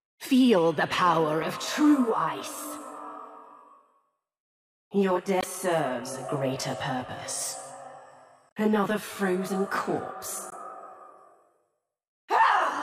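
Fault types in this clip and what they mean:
Channel delay (comb filtering): From about 1.4 s to the end, one channel runs roughly 20 ms behind the other, and when they're folded to mono the shared content cancels at evenly spaced frequencies. With a delay that long the first notch sits down around 30 Hz and the rest follow closely up the spectrum, so the sound turns rough or slightly doubled, and the colouring never moves.
Damaged data in a compressed stream: Three short glitches land at 5.40 to 5.44 s, 8.48 to 8.52 s and 10.49 to 10.53 s, each about 40 ms long. That's what you get when bytes in the encoded stream are corrupted: the decoder misreads a frame or two, loses sync, and hunts for the next valid header. You hear a brief disturbance where the stream went bad.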